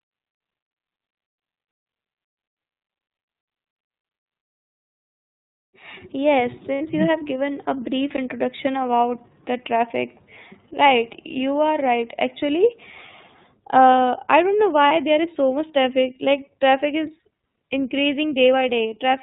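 Throughout the speech, the iLBC codec is plainly audible. Each 30 ms frame is coded on its own, which fits iLBC's 13.33 kbps mode, and the result sounds clear but slightly rough and synthetic. On a spectrogram, everything above 4 kHz is empty, a hard ceiling across the whole clip. The coded excitation also gives voiced stretches a grainy, less smooth harmonic texture.

From 6.75 to 6.81 s, just before "you have given a", there are lost iLBC frames. The gap lasts 60 ms, which fits two missing 30 ms frames. The decoder covers it by repeating the last pitch cycle blended with noise, so a short held, buzzy vowel replaces the real sound. A spectrogram shows flat, repeated harmonic bands with added noise instead of moving formants. Because each frame is self-contained, the speech is correct again immediately afterwards.

At 8.17 s, between "have given a brief" and "about the traffic right", a block of digital silence cuts out 15 ms. 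The output drops straight to silence and returns with no fade. The waveform shows a flat, silent stretch with abrupt edges. The spectrogram shows a blank vertical stripe.

From 14.88 to 14.91 s, between "uh I don't know" and "there is", another lost iLBC frame occurs. It lasts 30 ms, consistent with a single frame, and sounds like a brief buzzy smear. The spectrogram shows the same frozen harmonic pattern as at 6.75 s, only narrower.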